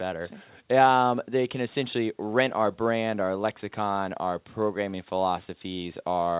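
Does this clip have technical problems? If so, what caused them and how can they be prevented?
No, the speech shows no technical problems; it carries the narrow telephone-style bandwidth of a call path, with nothing heard above about 4 kHz, consistent with a G.711 A-law codec.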